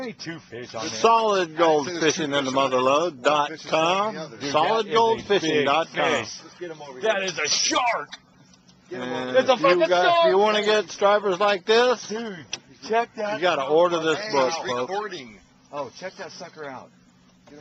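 No technical faults are audible anywhere in the recording.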